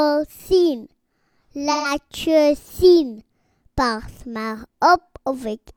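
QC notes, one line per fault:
1.71–1.91 s: AAC frame loss with concealment; 128 ms, fitting three frames, refilled from the last good spectrum, so it sounds smeared and noisy and shows as a blurred, flattened smear on the spectrogram.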